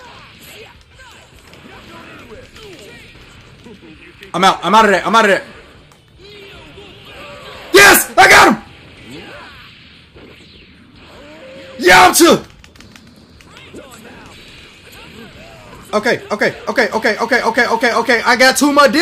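No technical faults can be heard anywhere in this clip. There are no dropouts, glitches or sudden changes in level at any point.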